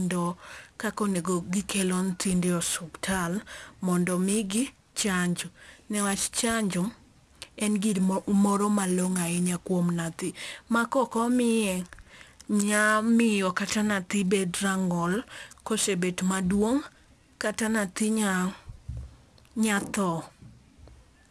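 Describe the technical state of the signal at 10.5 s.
At 10.5 s the speech carries aliasing, present across the whole clip rather than at this moment only. The sound points to a rate drop from 44.1 kHz to 24 kHz with no filter first. Energy above 12 kHz folds back below that edge at unrelated pitches. Sibilants turn gritty and metallic. The folded energy sits roughly 20 dB under the signal. The spectrum runs hard up to 12 kHz.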